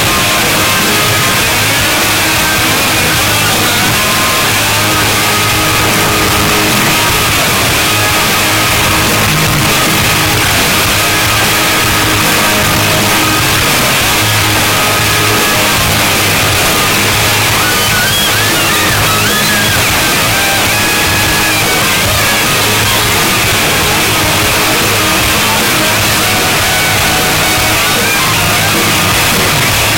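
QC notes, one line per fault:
throughout, signed and unsigned mixed up: the 8-bit samples were likely read with the wrong sign convention, flipping the top bit so every zero crossing leaps across the full range. The result is constant loud, harsh distortion, with quiet stretches as loud as everything else.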